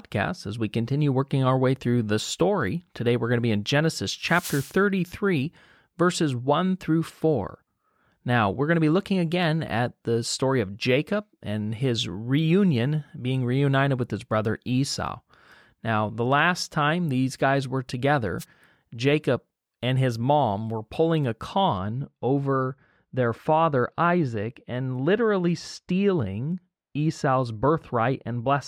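At 4.21 to 4.80 s, and again briefly at 18.39 to 18.45 s right after "time these guys were", there's a wireless microphone noise hit: the radio link fades and receiver static swishes in over the speech. From 21.78 s, just after "mom were pulling a", de-emphasis is applied wrongly, a treble cut with nothing to undo or applied twice, so the top slopes off about 14 dB at 10 kHz and everything goes muffled.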